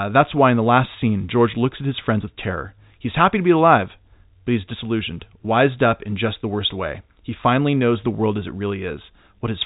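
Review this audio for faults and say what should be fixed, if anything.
No faults; nothing needs fixing.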